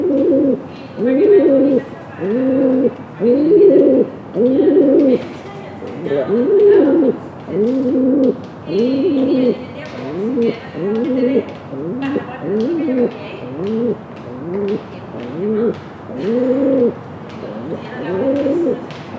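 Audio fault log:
Nothing stood out on listening to these sounds.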